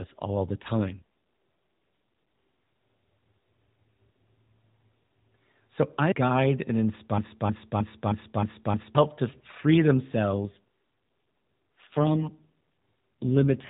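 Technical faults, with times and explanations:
0.78–1.03 s, after "all the", and 10.34–13.70 s, after "to free": AMR rate drop. The voice turns rougher and buzzier with the band unchanged, which fits the codec stepping down from 12.2 to 5.9 kbps on a weak link.
7.18–8.95 s, after "I guide and" and before "to free": broken-record loop. A 0.31 s fragment repeats six times back to back, likely because a stalled stream kept resending its last fragment, so the audio that belonged there is lost.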